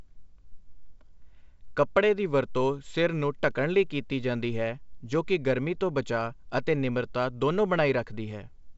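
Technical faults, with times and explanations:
No technical faults heard.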